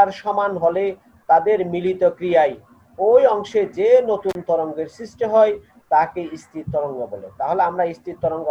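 At 4.29 s there's an intermittent contact: a loose plug or cable opens for about 38 ms, so the sound drops out briefly with crackle on both edges.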